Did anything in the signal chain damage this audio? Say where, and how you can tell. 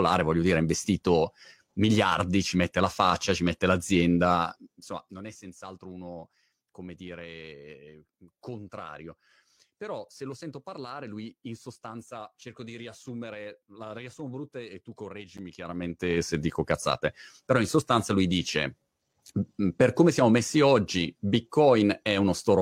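Yes. At 15.38 s, right after "riassumo brutta e tu", a gap between stream segments opens in network playback: roughly 10 ms of hard-edged silence. Unlike a dropout, nothing is missing. The sound resumes exactly where it stopped, so the segment timestamps left a hole rather than losing data.

From 15.51 to 16.36 s, leading into "dico cazzate però in", zipper noise rides a level change of about 20 dB. Gain processing applies it in 2 dB steps, roughly fifteen per second, and each step ticks.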